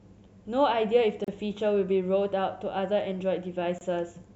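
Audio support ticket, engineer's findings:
Gap at a join of encoded pieces, 1.24 s: 35 ms dropout in continuous speech, edges smeared. Likely segment concatenation without trimming encoder start delay and last-frame padding.

Second gap at a join of encoded pieces, 3.78 s: 26 ms silence, same signature. Speech resumes where it stopped, with no lost material. Points to the same untrimmed join in the segment pipeline.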